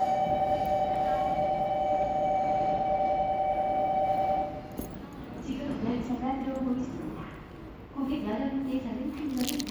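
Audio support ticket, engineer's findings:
Checked through the sound clip and found nothing to flag, so no action needed from our side on this one.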